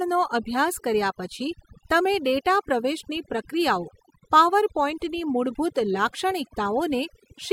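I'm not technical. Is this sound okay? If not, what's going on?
No, this speech has overdone noise removal throughout. The cleanup was set too strong, so quiet pauses twinkle oddly and quiet parts of the voice get cut away.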